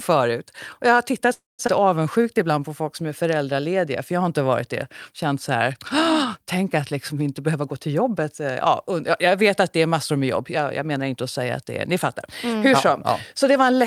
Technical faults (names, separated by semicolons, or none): call audio freeze; skip ahead; jitter buffer slow-down